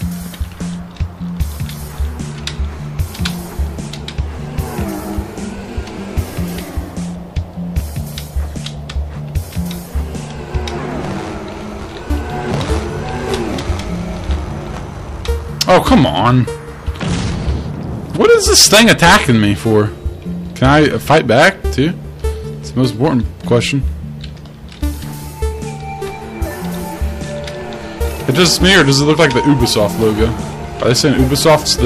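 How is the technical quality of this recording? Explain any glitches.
The recording suffers from repeated hard clipping in its second half: distortion on loud passages, from crackle to harsh fuzz, at 15.61–16.41 s, 18.21–19.81 s, 20.62–21.81 s, 22.83–23.14 s, 23.51–23.58 s, 28.29–30.24 s and 30.88 s to the end. The signal exceeded what a stage could pass, so peaks were sheared flat, spraying high harmonics. Overload reaches about 21 dB at 18.21 s, giving the roughest buzz, while the brief 23.51 s burst, at about 4 dB, is just a crackle.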